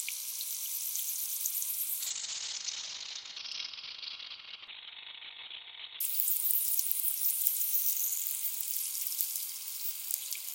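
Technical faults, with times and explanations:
2.0–6.06 s, call bitrate drop: the encoder falls from 96 to 7 kbps and bandwidth from 20 kHz to 4 kHz, so the sound turns coarse and muffled until it recovers.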